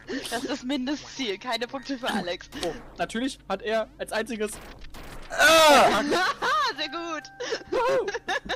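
There are no technical faults to describe in this audio.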